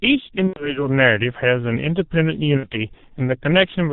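Throughout the speech the sound is muffled and hoarse, with consonants smeared and nothing audible above 4 kHz. This is heavy G.723.1 codec damage, at its rate of roughly 6.3 kbit/s. The codec works in 30 ms frames and refreshes its model of the vocal tract slowly, so rapid changes in the speech are averaged away and the top of the spectrum is cut off entirely.

From 0.47 to 0.86 s the speech collapses into a stretched, fading sound, a buzzy tone or coloured noise, then stays weak before recovering. Around 90 ms of audio is missing, which fits three lost 30 ms frames. This is VoIP packet loss concealed by the speech codec. The decoder repeats its last pitch and filter with falling gain, and because each frame builds on the one before, the distortion lingers after packets return. A shorter dropout at 2.57 to 2.67 s, about 60 ms or two frames, gives the same stretched, fading sound.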